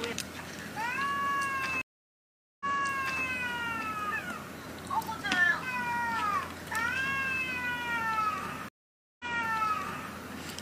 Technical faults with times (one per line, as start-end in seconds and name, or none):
1.81-3.25 stream reconnect
8.69-10.12 stream reconnect